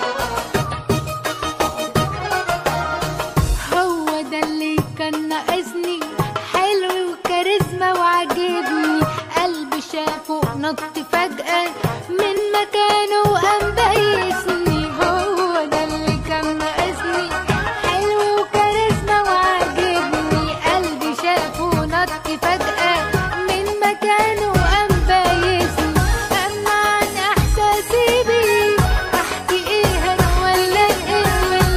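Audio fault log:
14.83–20.83 s, adaptive stream at a lower bitrate: for these six seconds the top end vanishes above about 12.3 kHz and things turn a bit synthetic and smeary. That points to the player dropping to a much leaner stream, something like 16 kbit/s, then snapping back without a gap.
29.84 s to the end, doubled audio track: a second full-band copy of the same audio kicks in abruptly, sitting roughly a second behind and a few dB quieter, dry with no room tail. It's likely a second capture path or an edit leaving two copies out of step.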